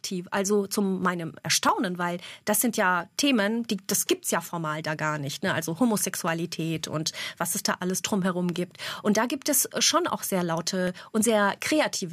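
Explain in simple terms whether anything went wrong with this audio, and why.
Something did go wrong. A click repeats through the speech, about every 0.66 seconds, from 0.37 to 11.53 seconds. That pattern points to clock drift buffer slips. Two devices likely ran at slightly different speeds, so a few samples kept being dropped or repeated.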